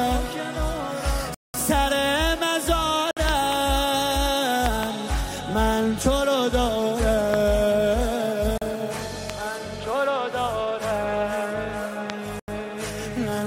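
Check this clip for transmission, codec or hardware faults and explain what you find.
Two faults recur: dropouts to silence and sharp pops.

Bluetooth stall at 1.34–1.54 s (about 200 ms), 3.11–3.17 s, 8.58–8.62 s and 12.40–12.48 s: likely radio interference delayed packets and the headphone buffer emptied, so the sound cuts out briefly and then resumes.

Loud pop, doubled at 3.29–3.55 s and 4.66–4.85 s, single at 7.34 s, 9.30 s and 12.10 s: a likely voltage spike from a switch, static or driver glitch adds sharp clicks, roughly 15 to 20 dB above the sound, which continues underneath.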